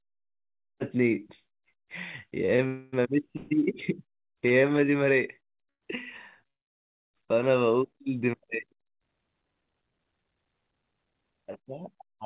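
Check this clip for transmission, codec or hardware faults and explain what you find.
Packet delivery on the call link broke down repeatedly between about 2.5 and 7.2 s, producing stalls, freezes and a brief slow-down. The audio is speech carried over a call path with nothing above 4 kHz, which fits narrowband G.711 coding.

Short stall from a late packet, at 2.46 to 2.50 s, 2.56 to 2.61 s and 4.47 to 4.53 s. Each time a packet missed its playout slot, the jitter buffer ran dry and the receiver held the last sound for 21, 24 and 33 ms. It then resumed from the same point, so nothing is lost. Each one sounds like a brief held sound.

Call audio freeze, at 2.67 to 2.95 s, 3.37 to 3.53 s, 5.69 to 5.84 s and 6.48 to 7.16 s. The likely cause is packets delayed in transit long enough to empty the buffer. The receiver kept extending the last sound for 259, 141, 121 and 663 ms. The first two are continuations of the last sound. 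In the third, about 90 ms fades to silence, and in the longest about 610 ms goes quiet. Speech then picks up where it stopped, so a gap is inserted rather than content lost.

Jitter buffer slow-down, from 4.13 to 4.86 s. With its reserve low, the buffer rebuilt it by repeating single pitch periods and pause fragments. This added about 36 ms and ran playback at 96% speed at unchanged pitch. The result is slightly drawn-out speech, with the 4.47 s stall falling inside this stretch.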